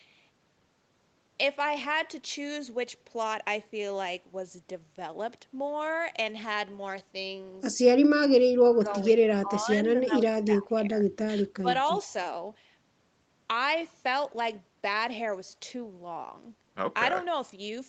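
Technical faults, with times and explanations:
9.42–9.68 s, 10.06–10.11 s, 10.32–10.93 s and 11.18–11.67 s, speech suppressed in double talk: with both ends likely talking at once, the echo canceller cannot tell this talker from the returning loudspeaker echo and turns down everything it hears. The speech dips or breaks up in short pieces. The brief dip near 10.1 s is slight, and the cuts from 10.32 s onward are the deepest, around 20 dB down.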